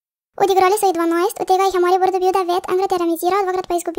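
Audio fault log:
Throughout, wrong sample rate. The speech runs 1.5 times too fast and sits about 7 semitones high, so it sounds hurried and squeaky. Speed and pitch rise together, with no conversion between rates. This fits audio recorded at 32 kHz but played at 48 kHz.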